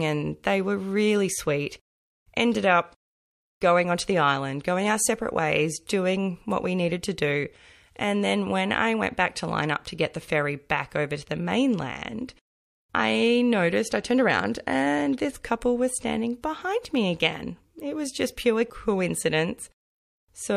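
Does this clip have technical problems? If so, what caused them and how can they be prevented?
Yes. Pre-echo at 16.42 s: about 11 dB of hiss precedes an attack, because the codec spread quantisation noise across a long block, consistent with a 36 ms window. Letting the encoder switch to short blocks around sharp transients would prevent it.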